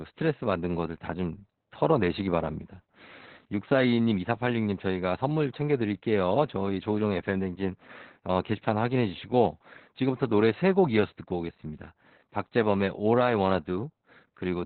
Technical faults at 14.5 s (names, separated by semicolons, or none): Opus voice compression